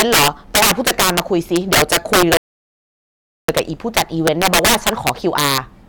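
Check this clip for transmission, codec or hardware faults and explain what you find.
Two faults affect this speech clip.

Integer overflow runs throughout. Peaks driven about 13 dB past full scale wrap to the opposite sign, causing harsh cracks. The waveform shows vertical full-range jumps, and the spectrogram shows broadband streaks.

A rebuffering stall occurs from 2.37 to 3.48 s. Playback ran out of buffered data, fell silent, then resumed at the same point, adding 1.1 s. This appears as a flat waveform gap and a blank spectrogram band.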